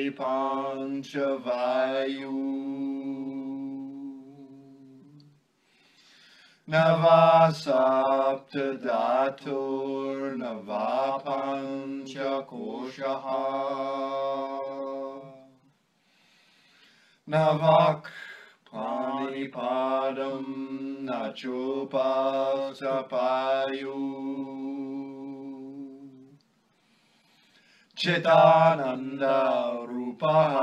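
Nothing here catches the ear as a technical fault at any point.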